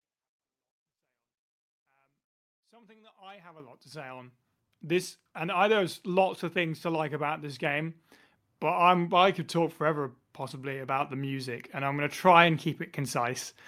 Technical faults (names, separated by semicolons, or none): microphone volume stepped up